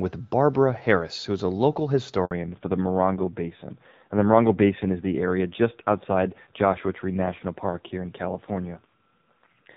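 Speech with a handover gap from 2.25 to 2.31 s: the voice dies away into 60 ms of true silence, with no concealment noise or repeated fragments as in packet loss. From 2.31 s to the end there is a fallback to narrowband. Before the gap the HD Voice sound is clear with only light codec texture, but afterwards everything above 4 kHz is gone. The voice also turns rough, which sets it apart from a plain low-pass filter and fits a low-rate AMR narrowband codec.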